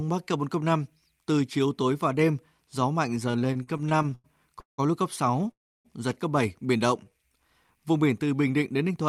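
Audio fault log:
3.31–4.80 s, repeated stalls (stutter): after "và đêm gió mạnh", 13 brief stretched holds (longest 180 ms) drag the speech until "lúc cấp"; the spectrogram shows repeated smeared, flattened bands.
5.51–5.87 s, call audio freeze: before "giật cấp", sound holds then fades to about 300 ms of silence, likely a jitter-buffer underrun; the waveform shows a flat gap.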